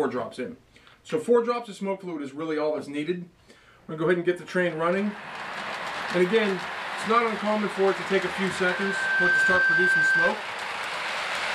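At 8.29 s a steady 1.6 kHz tone rises out of the sound, swelling over roughly a second to sit around 5 dB above it, then stops at 10.34 s. This is loudspeaker feedback squeal: the microphone recaptured its own loudspeaker, and that frequency's loop gain exceeded one.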